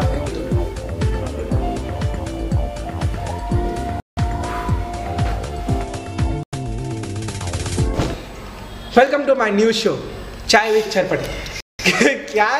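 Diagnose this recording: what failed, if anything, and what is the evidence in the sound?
Chunks out of order at the buffer stage: at 3.18 s and again at 9.07 s, a 20 ms chunk plays one slot late, giving a brief jumbled flutter. The waveform shows three abrupt discontinuities per event, and the spectrogram shows thin vertical broadband lines at each join.

At the playback stage, the sound drops to dead silence at 4.00 s for 0.17 s, at 6.43 s for 95 ms, and at 11.60 s for 0.19 s, and then resumes. The waveform is flat and the spectrogram shows blank vertical gaps. This is likely a Bluetooth stall, with the headphone buffer running dry.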